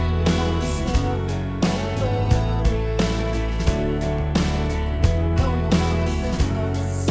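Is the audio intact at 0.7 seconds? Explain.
Yes, the audio is intact at 0.7 seconds, with no dropout, glitch or distortion at that moment, only the 8 kHz upper limit of the call path's G.722 wideband codec.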